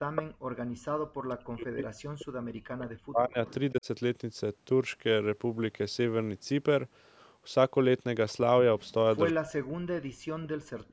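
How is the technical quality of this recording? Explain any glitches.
The recording has clear echo-canceller trouble: background gating, repeated echo leak and speech suppressed in double talk. The audio also tops out at 8 kHz, which is typical of call processing.

Background gated by the echo canceller, 0.0 to 0.54 s: with the far-end loudspeaker active, the canceller clamped the microphone hard, by about 40 dB at its deepest. The room sound drops out for roughly half a second, then returns when the canceller releases.

Echo leak at 0.16 to 0.23 s, 3.47 to 3.54 s, 8.86 to 8.93 s, and 10.88 s to the end: the canceller likely failed to fully remove loudspeaker pickup, sending a 176 ms delayed copy back. The first scrap is nearly as loud as the speech. Later ones are much fainter.

Speech suppressed in double talk at 0.87 to 3.38 s, 3.72 to 3.87 s and 9.33 to 10.51 s: both sides talked at once, and the canceller likely mistook the talker for echo and attenuated everything. 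The voice sinks by up to around 40 dB over about three seconds and then about one second, with a shallower dip of roughly 15 dB in between.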